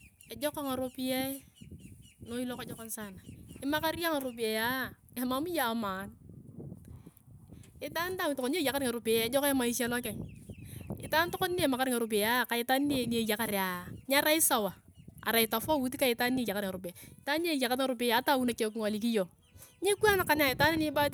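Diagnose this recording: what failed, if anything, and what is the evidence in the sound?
Nothing failed as far as I can hear; the speech comes through with no faults at any stage, so there's nothing here to diagnose.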